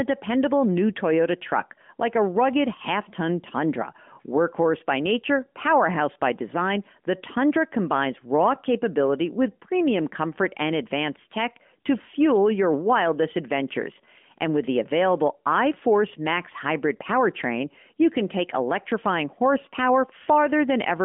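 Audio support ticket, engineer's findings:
No faults found; the speech carries the expected narrowband phone-line character, with nothing above roughly 3.6 kHz and light coding texture consistent with AMR-NB at its 12.2 kbps mode.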